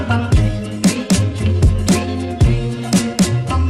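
Nothing stood out as a technical fault on listening to this audio.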